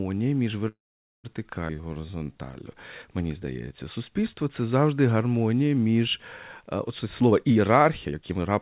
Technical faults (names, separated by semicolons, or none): call audio freeze; skip ahead; jitter buffer slow-down; jitter buffer speed-up